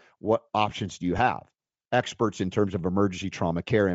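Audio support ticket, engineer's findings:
Grainy, breathy top end across the whole speech clip. Likely Bluetooth LC3 compression at a low rate, around 32 kbps, zeroing upper bands and noise-filling them.

Short noisy smear at 1.18 s, right after "what options do you". Lost LE Audio frames: the decoder repeated the last spectrum with scrambled signs, fitting one 7.5 ms frame.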